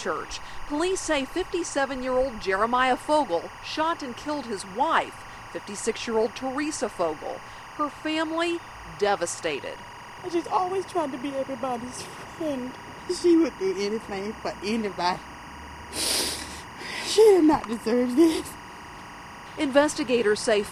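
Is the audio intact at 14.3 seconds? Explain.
No. Timecode bleed runs through the whole clip. Code from a neighbouring line leaks in, about 20 dB down, as a chirping warble switching between roughly 1 and 2 kHz.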